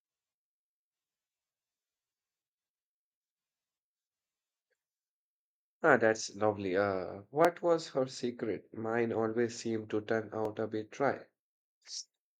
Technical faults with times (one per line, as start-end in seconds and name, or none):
7.45 overlapping chunks
10.45 overlapping chunks